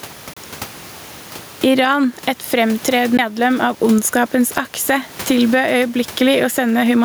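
A speech recording with two technical faults. The input gain was likely set far too high, so a fast limiter or compressor clamps down on each loud syllable and releases in the pauses. This gain pumping makes the level swing by roughly 10 dB: loud and soft parts end up closer in level, and the speech itself sounds squashed. The room noise sits about 29 dB below the speech. A CD skip then causes the player to lose its place on the disc spiral twice. The first, from 0.33 to 0.37 s, mutes for about 30 ms. The second, at 3.17 s, mutes for about 15 ms. Each is heard as a tick or short gap followed by an abrupt jump in the speech, as playback resumes from a different turn of the disc.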